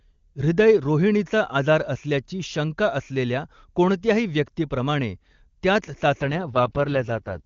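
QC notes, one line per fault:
6.21–7.45 s: AMR rate drop. The speech turns rough and synthetic to the end, with no gap or narrowing of the band. This fits AMR-WB falling from 23.85 kbit/s to 6.6 kbit/s, its lowest rate, trading speech detail for error protection.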